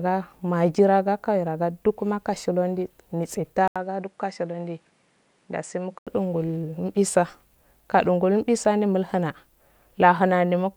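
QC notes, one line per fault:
3.68–6.07 s, input switched to a poorer device: after a brief gap of about 80 ms, the speech turns duller and a few dB quieter, with nothing above 10.3 kHz and a faint new background noise, likely from a narrower-band microphone taking over.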